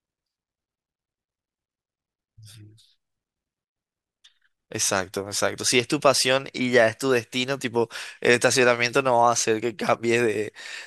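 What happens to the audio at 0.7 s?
Nothing goes wrong at 0.7 s; the speech there plays through intact, with no dropout, click or distortion.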